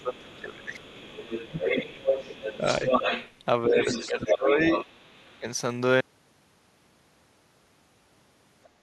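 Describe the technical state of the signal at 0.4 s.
At 0.4 s the talker's speech is suppressed in double talk, from 0.0 to 0.85 s. The level dips by as much as about 20 dB, in pieces. The likely cause is an echo canceller that turned down the talker along with the far-end echo while both sides spoke.

The other side's voice is also leaking through, from 0.0 to 5.39 s. It sits only about 5 dB below the talker. The echo canceller likely failed to remove the loudspeaker sound that reached the microphone.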